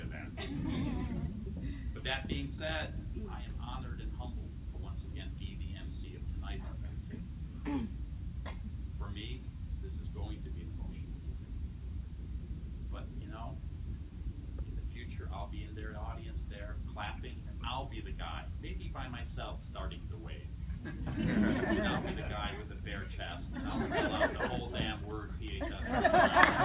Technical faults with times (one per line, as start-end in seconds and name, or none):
none